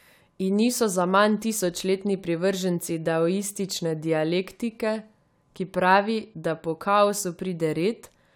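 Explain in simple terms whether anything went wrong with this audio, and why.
Nothing went wrong here.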